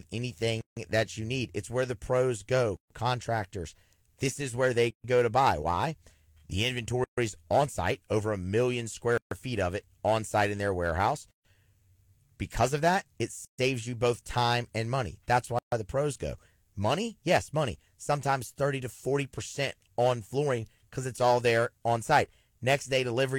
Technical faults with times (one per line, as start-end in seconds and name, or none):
0.61-0.77 gap at a join of encoded pieces
2.77-2.90 gap at a join of encoded pieces
4.90-5.04 gap at a join of encoded pieces
7.04-7.18 gap at a join of encoded pieces
9.18-9.31 gap at a join of encoded pieces
11.31-11.45 gap at a join of encoded pieces
13.45-13.59 gap at a join of encoded pieces
15.59-15.72 gap at a join of encoded pieces